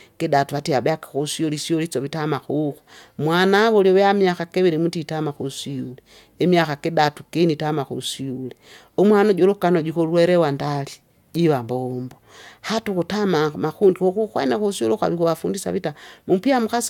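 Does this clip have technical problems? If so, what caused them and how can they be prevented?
No, the speech signal holds steady throughout, with no audible technical faults and nothing that calls for a preventive fix.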